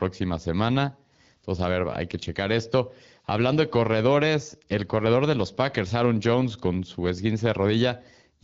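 No technical faults turn up anywhere in the speech. It comes through an AMR wideband (HD Voice) link at 12.65 kbit/s, where the coding leaves only light traces on the sound.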